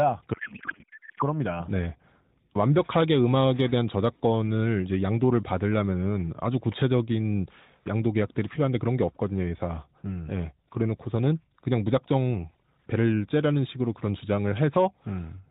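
From 0.34 to 1.23 s, a codec payload misread turns the speech into garbled warble that barely tracks it. The sound doesn't drop out as it would with packet loss. It continues scrambled, which fits octet-aligned AMR frames being unpacked as bandwidth-efficient.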